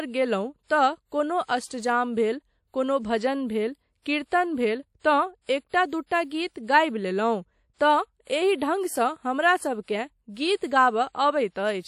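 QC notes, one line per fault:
Throughout: WMA compression, likely. The speech carries plainly audible transform-codec damage: a ringing, washy smear around transients and a hiss that swells and fades with the signal, because quantisation noise is spread across long blocks tens of milliseconds wide. Weak spectral detail drops out, and nothing remains above 16.2 kHz. The degree of damage points to an early WMA encoder running at a low bitrate, around 48 kbps.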